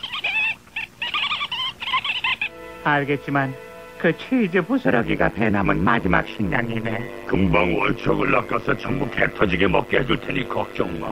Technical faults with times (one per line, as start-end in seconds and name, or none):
4.84-11.11 overlap-add ripple